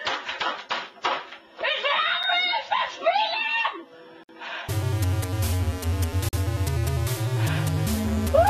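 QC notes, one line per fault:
1.65–2.65 s, loudspeaker feedback squeal. A 3.7 kHz tone swells over about half a second to roughly the sound's level, as the mic-to-speaker loop rings.
2.23 s, 4.23–4.29 s, 6.29–6.33 s, gaps between stream segments. Hard-edged silences of 6, 55 and 43 ms recur every 2 s, where segment timestamps leave holes.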